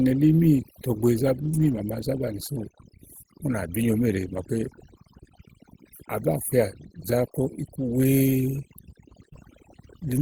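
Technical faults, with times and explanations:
Throughout: overdone noise removal. The noise reduction was set so hard that any frequency band near its noise estimate is pulled almost to nothing, taking the quieter parts of speech with it. Pauses drop to near silence dotted with twinkling specks. On a spectrogram, the gaps show a dark floor scattered with isolated bright dots, and the harmonics look patchy and eroded at their edges rather than smooth.
1.43 to 1.81 s, 4.35 s (just after "bí nyo méèle"), 9.21 to 9.27 s and 9.37 s: lost packet rebuilt from error correction. Each loss was covered by a low-bitrate copy carried in the following packet, so there is no gap, but those stretches sound rougher and grainier. The long first stretch fits a run of about ten 20 ms packets. On a spectrogram, harmonics look smeared and noisier there.
9.29 to 9.33 s and 9.33 to 9.37 s: short concealed packet loss. 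About 20 ms went missing twice in a row, and the decoder bridged each hole by extending the preceding sound before blending back into real audio. The result is a brief smear or wobble right between the rebuilt frames.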